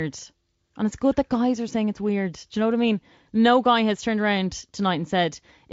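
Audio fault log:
Nothing stood out on listening to this speech.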